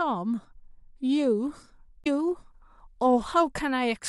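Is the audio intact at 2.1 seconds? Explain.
No. Damaged data in a compressed stream runs from 2.03 to 2.07 s, just before that moment. Corrupted bytes there made the decoder misread the frames and lose sync while it searched for the next valid header, leaving a short glitch in the speech.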